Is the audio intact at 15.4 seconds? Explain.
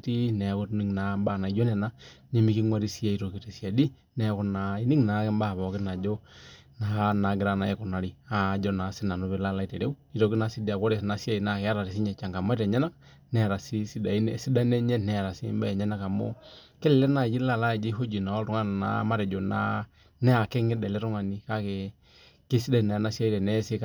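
Yes, at 15.4 seconds the speech plays through intact, with no dropout, click, distortion or other fault at that moment.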